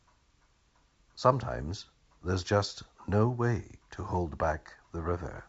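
The speech carries no technical faults, its band stopping near 7.7 kHz with at most a faint upper-band hiss, which fits G.722 wideband telephone coding running at its full 64 kbit/s rate.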